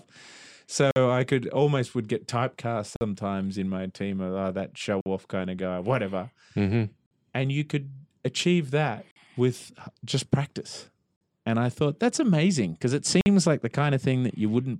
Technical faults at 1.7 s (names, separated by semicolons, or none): none